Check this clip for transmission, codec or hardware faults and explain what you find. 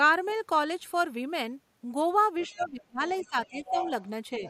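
Two echo-related faults overlap in the second half of this speech clip.

Other side's voice leaking through occurs at 2.4 to 2.66 s, 3.07 to 3.28 s and 3.45 to 4.09 s. A second voice is audible under the talker. The first two scraps are faint. The last is much stronger, only about 10 dB down. The likely cause is loudspeaker echo that the echo canceller left in the microphone signal.

Speech suppressed in double talk occurs at 2.5 to 3.05 s, 3.22 to 3.85 s and 4.35 to 4.44 s. The talker's level dips. The first dip is deep, roughly 25 dB, the second moderate and the last slight. The likely cause is the canceller turning everything down when both sides spoke at once.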